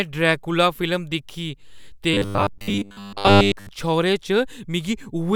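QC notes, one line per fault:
2.14–3.69 s: robotic sound from repeated short buffers. The speech collapses into a rigid, metallic buzz with a fixed pitch of 100 Hz, while the syllable shapes still roughly track the words underneath. The likely cause is audio reaching the output too seldom, so the software loops the last fragment of about 10 ms to fill the gaps. Most of the real audio in this span is skipped, and the repetition rate sets the buzz frequency.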